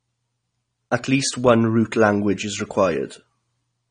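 Throughout the speech, the audio was likely squeezed through AAC compression at a low bitrate, consistent with around 32 kbps AAC-LC. The encoder drops high frequencies and leaves gaps in the spectrum, so the sound is plainly dull and smeared, with a warbling, fizzy edge on sibilants.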